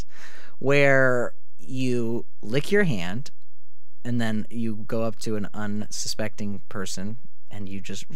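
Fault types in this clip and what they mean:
DC offset: The whole speech waveform sits shifted away from zero by a fixed amount, about -20 dBFS, for the entire clip. You cannot hear this shift as a sound in itself. It shows instead as steady energy right at 0 Hz, the very bottom of the spectrum. Because the signal starts from a displaced centre line, it eats into headroom on one side.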